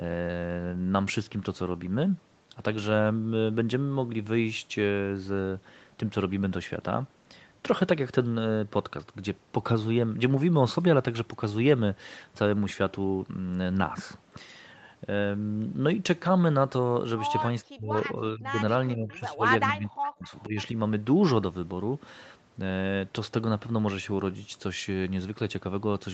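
From 17.65 to 20.57 s the speech is repeatedly pushed down in four stretches: 17.65 to 17.96, 18.15 to 18.59, 18.93 to 19.44 and 19.71 to 20.57 s. This is speech suppressed in double talk, likely an echo canceller that couldn't separate the talker from loudspeaker echo while both sides spoke, so it attenuated everything. The first and last dips go about 40 dB down, the middle two about 20 dB. On the waveform the envelope collapses in blocks, and on a spectrogram the energy fades column-wide, with content never reaching above 8 kHz.

Overlapping the last dip, from 20.25 to 20.64 s, a faint delayed copy of the speech comes back, trailing the original by 467 ms at about 20 dB below it. This is an echo leak, likely residual loudspeaker pickup that the canceller failed to remove and sent back down the line. It sounds like a ghostly repeat. A spectrogram shows a weaker replica of the speech's harmonic pattern shifted right by roughly half a second, and the waveform shows a low-level shadow burst inside the suppressed region.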